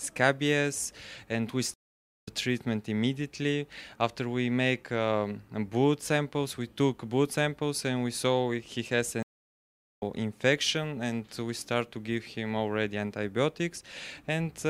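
Stream reconnect at 1.74 s and again at 9.23 s: each time the connection dropped and the player went quiet, first for 0.51 s, then for 0.77 s, before reconnecting with a fresh decoder partway through the stream. Because the stream kept moving while the player was away, the sound resumes ahead of where it stopped, by about half a second after the first gap and roughly 0.7 s after the second, so a stretch of audio is simply skipped.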